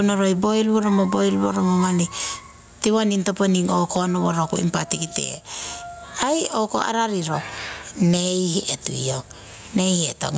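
Gain pumping runs through the whole clip. The level never settles. The swing is large, somewhere around 15 dB. Loud and soft passages sit oddly close together, and the speech sounds squashed and breathing. The likely cause is input gain set far too high, with a fast limiter or compressor clamping each peak. The call's microphone processing is also audible, with nothing above 8 kHz.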